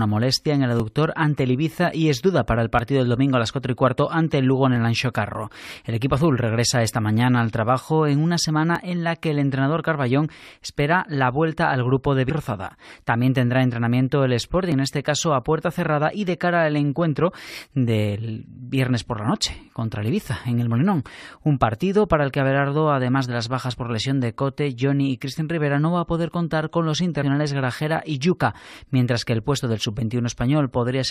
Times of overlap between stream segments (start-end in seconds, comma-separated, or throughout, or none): 0.80, 2.79, 4.76, 6.76, 8.75, 10.75, 14.72